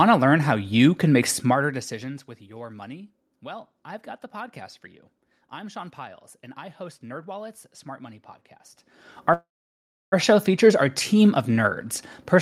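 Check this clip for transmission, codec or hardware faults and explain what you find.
Two faults are audible, one in the level control and one in the call's transmission path.

Zipper noise runs from 1.39 to 2.24 s, between "how you can make" and "with your money". The level falls by about 20 dB, but the gain is applied in unsmoothed steps, roughly a hundred per second, rather than as one continuous ramp. Each jump leaves a tiny click, so a fast ticking, zipping texture rides on the speech for as long as the level is moving.

A call audio freeze occupies 9.33 to 10.14 s, just before "show features our team". The likely cause is packets delayed in transit, so the receiver's jitter buffer ran dry. The last sound is stretched into a fading buzz or hiss, then about 0.67 s of silence, filling roughly 0.79 s in all. Speech then resumes where it stopped, with nothing lost, so the rest of the clip simply arrives late.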